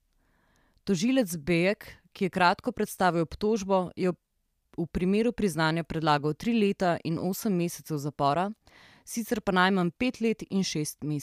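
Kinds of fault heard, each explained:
Nothing in this speech recording stands out as a technical fault; it all sounds as it should.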